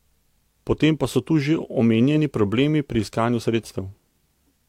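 Nothing stood out on listening to this speech recording.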